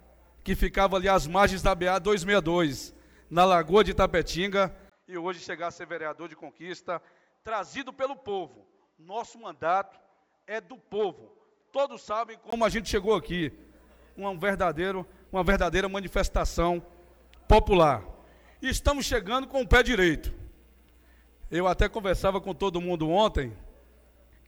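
From 4.90 s to 12.52 s, the recording likely switched its input to a poorer device, then back again. For that stretch the audio loses everything above 7.6 kHz, so it turns duller and boxier. It also drops in level by around 10 dB and carries a different, faint background noise sitting well below the signal. A brief gap of about 20 ms marks the switch, and the fuller, brighter sound returns at 12.52 s.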